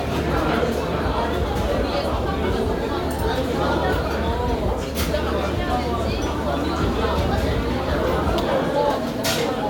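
Right through the clip there's a block size mismatch (truncated): block tails get chopped, leaving a steady buzz near 46.9 Hz, which fits 1024-sample blocks, though playback speed stays normal.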